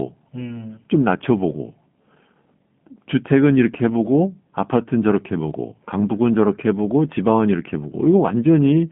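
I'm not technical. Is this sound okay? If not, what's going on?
No. The whole clip has passed through the G.729 codec, a phone-call format that rebuilds speech from a rough model of the voice. Nothing above about 3.8 kHz survives. The speech sounds narrow, boxy and noticeably rough, slightly synthetic, from start to finish.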